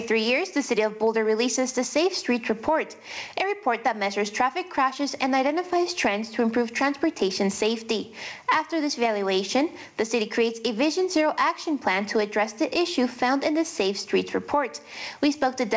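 Gain pumping runs throughout: the gain swings by about 15 dB under loud sounds, likely from excessive gain driving a fast limiter.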